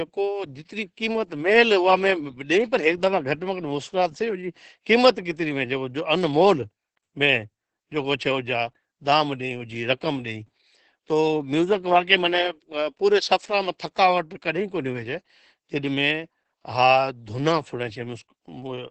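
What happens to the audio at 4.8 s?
At 4.8 s the speech carries Opus voice compression, as it does for the whole clip. The SILK linear-prediction coder is running in wideband mode on 20 ms frames, at a rate that sounds consistent with about 10 kbps. It models the voice with a spectral envelope and codes the excitation coarsely, so the damage is heavy: hoarse, muffled and faintly robotic. On a spectrogram, energy stops at about 8 kHz, and harmonics look smeared.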